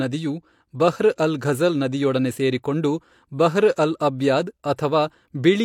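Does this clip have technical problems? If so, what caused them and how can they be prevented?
Yes. A transform codec placed a sharp attack in this speech late in its coding block and spread that block's quantisation noise evenly across it, so noise sized for the loud onset also filled the quiet stretch just before it. The result is pre-echo from 4.76 to 4.78 s, a short hiss about 23 ms long that precedes the attack and blurs its edge. Encoding with block switching to shorter windows around transients, or with temporal noise shaping, prevents it.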